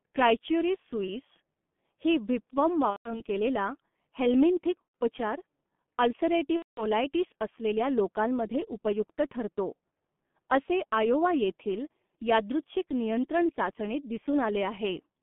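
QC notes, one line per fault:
throughout: G.723.1 codec, heavily damaged, pointing to about 6.3 kbit/s. The 150 Hz–3.5 kHz band and slow 30 ms model leave speech muffled, hoarse, consonants blurred.
2.90–3.21 s, 4.83–4.95 s, 6.56–6.86 s: VoIP packet loss concealed by the speech codec. The decoder stretches its last pitch and filter, so the sound is drawn out and fades, goes mute from the third lost frame, and stays weak briefly afterwards.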